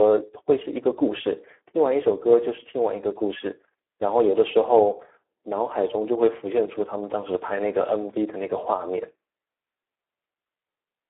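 Speech, with Speex codec damage throughout: the voice is hoarse, noisy and edging toward robotic, as the CELP coder starves the excitation, which fits a rate near 8 kbps. It is also confined to a 300 to 3400 Hz telephone band, with nothing above 3.8 kHz.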